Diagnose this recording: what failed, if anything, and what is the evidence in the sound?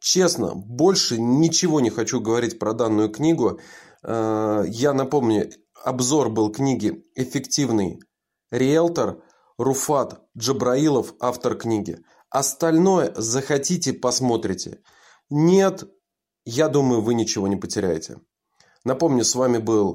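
Listening through the speech in this recording, nothing stood out that would point to a failure at any stage of the chain.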